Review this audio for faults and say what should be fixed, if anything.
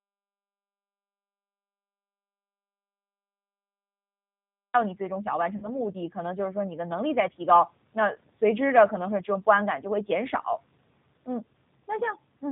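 The whole clip passed through a G.729 codec, most likely the low-complexity G.729A variant at 8 kbit/s. The encoder discards the waveform and rebuilds each 10 ms frame from a vocal tract filter, a pitch predictor and a handful of pulses. It also cuts everything above 4 kHz. The damage is plainly audible: the speech is intelligible but dull, slightly rough and synthetic. To prevent it, carry the call over a wideband codec such as G.722 or Opus instead.

The input signal was lost from before the clip begins until 4.74 s, most likely through a disconnected device, a failed link or a stray mute. The recorder kept writing silence, so the first 4.74 s are silent with no room tone. The speech then starts abruptly mid-flow, and whatever came before it is gone. To prevent it, monitor input levels and connection state so a silent source is flagged before recording continues.

Between 5.56 and 5.69 s, about 60 ms of audio packets failed to arrive, which fits three 20 ms packets. 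The G.729 decoder filled the gap by extrapolating from its last pitch and filter settings while lowering the gain. The voice is stretched into a buzzy tone or a coloured noise that fades, and because each frame builds on the previous one, it stays weak and smeared briefly after the packets resume. To prevent it, add forward error correction or a larger jitter buffer, or fix the congested network path.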